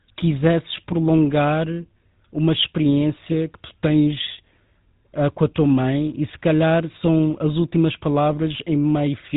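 Speech, heard throughout with GSM full-rate codec damage: a plainly buzzy, gravelly roughness that fits 13 kbps pulse-excited coding, and a spectrogram showing a hard ceiling at 4 kHz.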